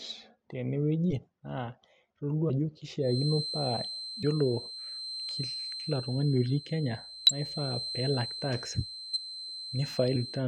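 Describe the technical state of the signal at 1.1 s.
At 1.1 s the speech shows compressed frames skipped, spanning 1.09 to 1.13 s. Frames were missing or rejected by the decoder, so playback jumps ahead by about 20 ms.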